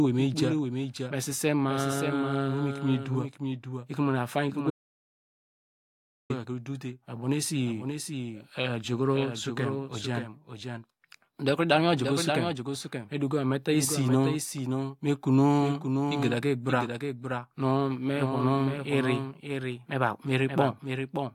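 Throughout the speech, a doubled audio track is audible: a second, full-band copy trails the original by roughly half a second, around 5 dB quieter, with no decay or room colour. It is likely a second capture through a slower path or an edit holding two misaligned copies.

From 4.70 s to 6.30 s there is an audio dropout to silence lasting 1.59 s. The speech cuts out mid-flow and the gap carries no room tone, likely from a lost input such as a disconnected device, failed link or stray mute, with recording continuing as silence.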